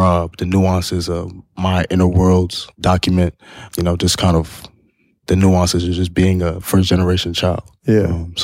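Nothing goes wrong anywhere in this bit of speech, so there's no technical fault to point to at any moment.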